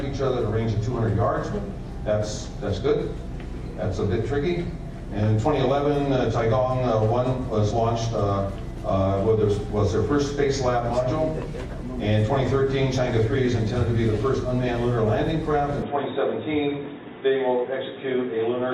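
At 15.82 s the audio turns dull and boxy through to the end. Nothing passes above 3.8 kHz, and a faint new noise floor appears, with no gap at the change. The likely cause is an input switched to a poorer device.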